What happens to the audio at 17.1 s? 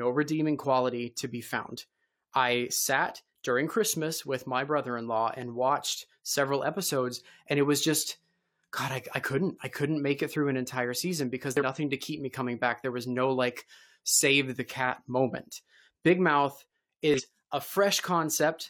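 A short glitch cuts into the speech from 17.14 to 17.21 s, a burst of about 70 ms. This is damaged data in a compressed stream: a stretch of the encoded file was corrupted, so the decoder misread the frames there, lost its place in the bitstream and had to hunt for the next valid frame header before normal decoding could resume.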